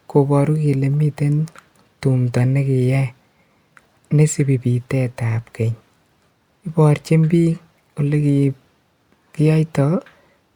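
A speech recording with nothing technically wrong to point to. No dropout, distortion or timing disturbance can be heard at any point.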